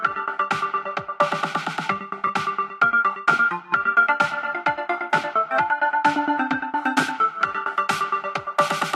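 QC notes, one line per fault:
2.27–2.30 s and 5.08–5.13 s, corrupt frame concealed: two short concealed stretches, about 34 ms and then 50 ms long. Damaged bits in the coded stream were caught by the decoder, which filled the gaps itself by muting or by reusing the last good spectrum with scrambled signs. Two and then four frames were hit.
6.78 s to end (8.96 s), pre-emphasis left on: from this point the everyday sounds turn thin, bright and hissy. A treble boost fitting the FM 50 µs curve was applied, but the matching de-emphasis cut never followed. High frequencies sit about 10 dB hotter at 10 kHz than at 1 kHz. The sharp change in tonal balance partway through shows the uncorrected boost is confined to this final stretch.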